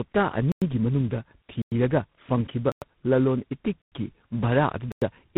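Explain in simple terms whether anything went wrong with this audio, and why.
Tandem speech coding runs through the whole clip. The speech passed through three different phone-network speech coders in a row, each squeezing the already damaged result again, so it sounds rough, muffled and warbly, with nothing above 3.9 kHz.

Gaps between chunks occur at 0.52, 1.62, 2.72, 3.82 and 4.92 s. At each one, a silence of 100 ms cuts in between one-second pieces of audio, including just before "ꯐꯪꯈꯤꯕ ꯂꯂꯣꯟ" at 1.62 s and just after it at 3.82 s.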